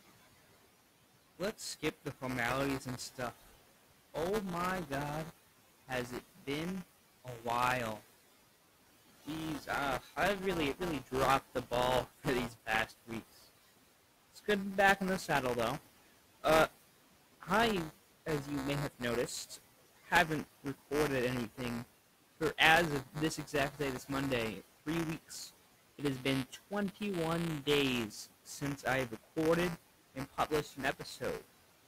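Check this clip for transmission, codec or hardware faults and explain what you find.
Two faults run through the whole clip, and a third keeps popping up in bursts.

Noise suppressor artifacts are present from start to finish. The suppressor estimates the steady background in each frequency band and pulls those bands down frame by frame, by about 17 dB here. The room noise, sitting about 17 dB under the speech, drops away in the gaps and swells back up beneath each phrase.

Buffer tearing is also constant, heard as a robotic buzz at 200 Hz that rides on the speech and vanishes in the pauses. The app writing the ring buffer and the hardware reading it have drifted out of step, so they cross inside every period. A small slice of each buffer, well under a tenth, ends up holding audio from about ten milliseconds earlier, with a hard edge on either side. A 200 Hz repeat points to a period of about 5 ms. 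The stale audio being one lap back fits a ring of two such periods.

Speech cut by the noise suppressor shows up at 1.39–4.9 s, 5.88–8.01 s, 9.25–13.1 s, 14.35–15.29 s, 17.41–20.65 s and 21.56–31.45 s. The same suppressor mistakes bits of the speech for background and turns them down along with it. The deepest dips are about 13 to 15 dB in the early stretches and reach about 17 dB from 17.41 s on. Each stretch loses only short fragments, around a third of a second in total in several of them and closer to a second in the long final one. Those fragments sound swallowed and faint.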